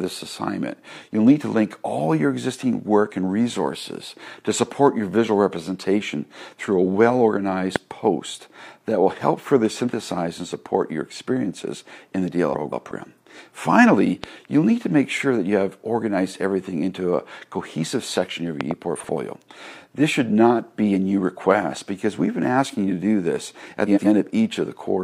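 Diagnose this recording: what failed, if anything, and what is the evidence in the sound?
Loud pops at the analogue wiring or power stage, most likely a voltage step from a plug, switch or static discharge, appear at 7.76 s, 14.24 s and as a pair between 18.61 and 18.73 s. They rise well above the programme, roughly 20 dB at the first and last, nearer 15 dB at 14.24 s. The sound carries on unbroken underneath each thump, which separates these added pulses from a dropout or a buffer glitch, where the signal itself would break.

Frames out of order, a transport fault in the network or storage path, shows up at 12.53 to 12.91 s, 18.96 to 19.09 s and 23.86 to 24.07 s. In each stretch two adjacent blocks play swapped: 185.8 ms each in the first, 46.4 ms in the second and 92.9 ms in the third, which fits runs of four, one and two codec frames of about 46 ms. Each swap is a garbled flutter. Nothing goes missing and the timing stays intact, unlike packet loss or a concealment gap.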